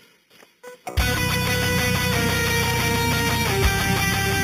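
From start to finish there's imaging from sample-and-hold upsampling: an 8 kHz rate was raised to 44.1 kHz by simply repeating samples, unfiltered. A mirrored copy sits between 4 and 8 kHz, about 10 dB down, giving a metallic fizz that tracks the sound.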